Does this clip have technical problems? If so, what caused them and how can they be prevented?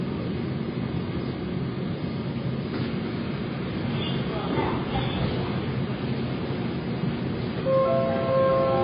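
Yes. Throughout, the audio has nothing above 5 kHz and a smeared, warbling texture, likely from heavy AAC compression at a low bitrate, around 16 kbps. Encode at a higher bitrate to prevent it.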